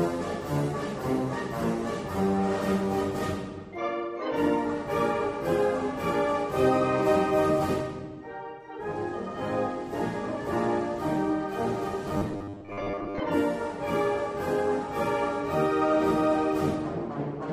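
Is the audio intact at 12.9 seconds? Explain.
No. From 12.10 to 13.21 s the sound turns into a rigid 100 Hz metallic buzz, robotic sound from repeated short buffers, likely about 10 ms snippets replayed for roughly half that stretch.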